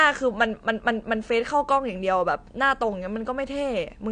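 From start to finish the speech carries plainly audible damage from AAC compression. Nothing sounds above about 9.8 kHz, and sibilants and held vowels have a watery, fizzy warble as the encoder drops or noise-fills bands it can't afford. That is likely a low-bitrate AAC-LC encode, with the texture fitting roughly 32 kbps. A plain low-pass filter would dull the top without that shifting, swirling texture in what remains.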